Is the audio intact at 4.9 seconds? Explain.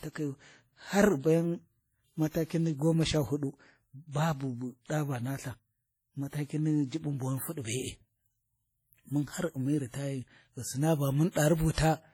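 No. A short hiss smears in from 4.86 to 4.90 s, about 39 ms, just before "ɗa va naltha", softening the attack. This is pre-echo, where block quantisation noise leaks ahead of the onset. Throughout, the sound rings and washes with signal-following hiss, likely heavy WMA compression at a rate that fits about 32 kbps.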